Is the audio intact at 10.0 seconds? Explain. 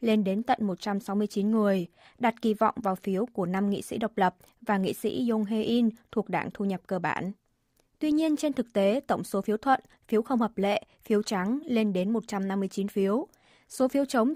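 Yes, the audio at 10.0 seconds is intact, with no fault audible at that moment.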